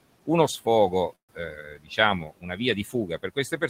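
Packets likely stalled in transit and emptied the jitter buffer, producing a call audio freeze in this speech clip just after "uno sfogo", from 1.15 to 1.31 s. The receiver filled about 133 ms, the tail of the last sound dying away into roughly 120 ms of silence, before the stream resumed exactly where it left off. Nothing is lost, but that pause is inserted and everything after it runs about 133 ms late. Next, the noise suppressor mistook parts of the speech for noise and pulled them down along with the background, which sits about 20 dB below the voice. This speech cut by the noise suppressor appears at 1.55 to 1.98 s, with about 15 dB of attenuation across roughly a third of a second. It recurs at 2.28 to 2.59 s, dipping about 18 dB over only around a tenth of a second, and again from 2.91 s to the end at 3.70 s, at about 15 dB. In each span, the affected speech comes out swallowed and faint.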